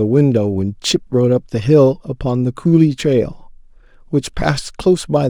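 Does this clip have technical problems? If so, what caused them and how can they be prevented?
Yes. Sample clock jitter runs throughout: timing wobble of around one and a half microseconds turns steep, loud speech into hiss about 45 dB down, seen as faint high-frequency haze tracking bright spectrogram energy and vanishing in pauses. Prevent it with a clean, low-jitter converter clock.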